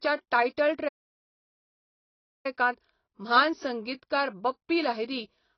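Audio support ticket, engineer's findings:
Speech dull and smeared throughout, nothing above 6 kHz, warbling on sibilants. Likely AAC compression, low bitrate around 20 kbps, band cut-off lowered.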